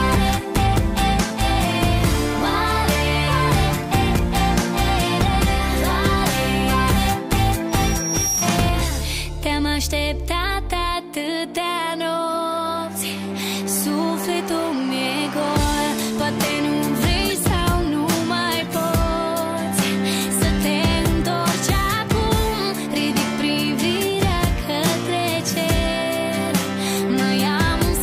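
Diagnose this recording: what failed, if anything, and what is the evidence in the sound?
Loudspeaker feedback squeal, in the acoustic loop between a loudspeaker and the microphone capturing it, before any conversion or coding. From 7.69 s to 8.54 s a single tone at 5.7 kHz swells over about 0.7 s until it is roughly as loud as the rest of the sound. At that frequency the mic-to-speaker loop gain went above one, so the tone fed on itself. That steady build-up separates it from a whistle or interference tone, which would appear at full level at once.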